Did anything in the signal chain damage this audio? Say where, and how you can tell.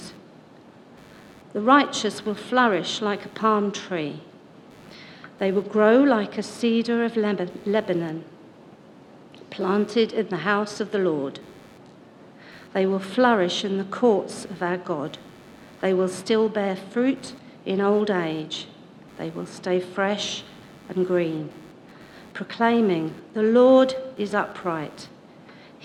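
Yes. In the analogue wiring, the computer's shifting processor and graphics load modulates the ground the audio circuit shares, producing computer activity noise: a buzzing, chirping layer pulsing at around 100 Hz for the whole clip, roughly 35 dB below the sound, tracking machine activity rather than the audio.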